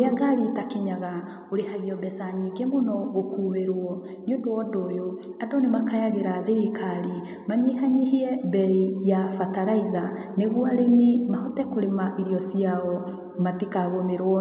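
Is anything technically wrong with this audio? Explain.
Yes. There is an automatic gain falling fault at the very start of the speech. From 0.05 s to 1.57 s, just before "mbeca myingĩ mũno", the level sinks by about 8 dB. The gain control judged the opening too loud or its background too strong and pulled its gain down over about a second and a half, so the speech and its background fade down together. The band stops at 4 kHz, which points to a G.711 mu-law call path carrying the audio.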